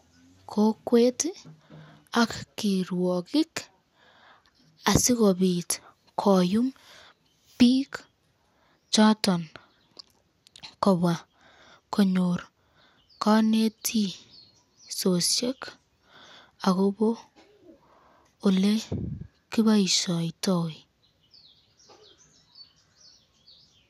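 No technical faults can be heard anywhere in the recording. At no point does anything in the audio stand out as a fault.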